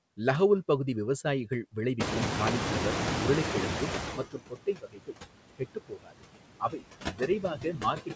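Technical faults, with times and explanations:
Throughout: noise suppressor artifacts. The suppressor pulls down every band it judges to be steady noise, frame by frame, by about 20 dB. The background dips in the gaps and swells back under the speech, so the residue pumps. The band stops at 8 kHz, which fits a wideband call codec such as G.722.
1.99 to 4.25 s: noise suppressor catching up. Room noise jumps by about 24 dB at about 2 s and settles only about 5 dB below the speech. The suppressor's noise estimate still reflects the quieter room, so the new noise comes through with only about 14 dB of reduction. Over the next 2.26 s the estimate adapts, and the noise sinks toward the deeper cut.
4.16 to 5.19 s, 5.56 to 6.23 s, 6.6 to 6.84 s, and 7.08 s to the end: speech cut by the noise suppressor. The suppressor mistakes parts of the speech for noise. In the first three spans it turns them down by about 22, 22 and 18 dB, over roughly 0.7, 0.4 and 0.2 s. 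In the last span the drop is about 21 dB. The cut parts sound swallowed or faint.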